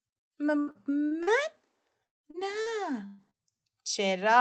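From 0.59 to 1.30 s there is repeated packet loss, giving a robotic sound. Four gaps, the longest 76 ms, were patched by extending the previous sound. About 200 ms went missing, and patched audio fills roughly a quarter of the stretch. The result is choppy, with pieces missing.

From 2.07 to 2.26 s the sound breaks off. A brief continuation fades into about 150 ms of silence. The audio then resumes with about 160 ms gone. This is likely a long network dropout.

Three short concealed packet losses follow, at 2.31 to 2.37 s, 2.62 to 2.69 s and 3.30 to 3.37 s. Each one lost about 40 ms. The receiver bridged each hole from the preceding sound, so each is heard as a quick smear or wobble.

From 3.06 to 3.21 s there is a burst of packet loss. About 120 ms never arrived in time. The last sound is stretched into a held buzz or hiss that fades with no full silence. The audio then picks up further on. 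The call codec limits bandwidth to 8 kHz, which fits a 24 kbps Opus setting.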